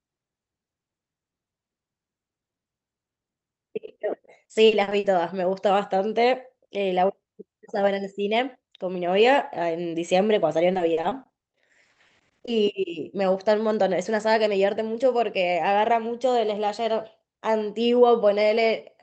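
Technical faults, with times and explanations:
3.85–5.05 s: repeated packet loss (robotic sound). Short gaps of up to 40 ms recur, each patched by extending the last sound. About a fifth of the stretch is filled, giving a choppy texture with pieces missing, unlike a single clean dropout.
10.73–12.49 s: repeated packet loss (robotic sound). This is a denser run of the same brief holes, up to 40 ms each, with about 22% of the span concealed. The tightly packed patching leaves choppy sound with pieces missing.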